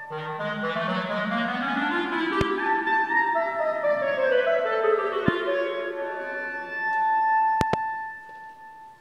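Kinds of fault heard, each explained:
Loud pop: sharp thumps at 2.41 s, 5.28 s and a double at 7.61 s, likely voltage pulses; unlike a dropout, sound continues underneath.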